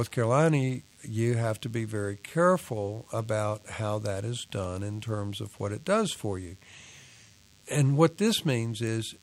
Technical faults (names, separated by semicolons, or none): DECT cordless phone buzz